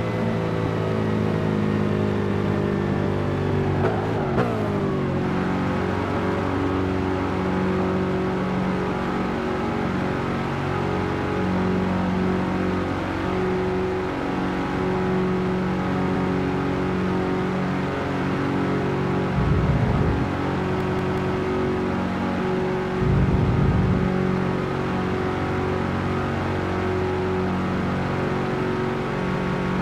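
You get a repeated buffer three times: at 16.16 s one chunk of about 186 ms plays twice, at 20.81 s it plays four times, and at 29.35 s three times. New audio didn't arrive in time, so the device replayed the last block, which fits an 8192-sample buffer. Each one is a hard-edged stutter, and it doesn't seem to drop any audio.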